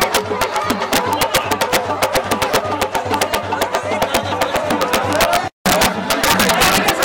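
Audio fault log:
throughout integer overflow: the signal is pushed about 9 dB past full scale, and instead of being limited, the loudest peaks, around one percent of samples, wrap to the opposite sign, jumping across the whole range and producing harsh, violent cracks far sharper than ordinary clipping.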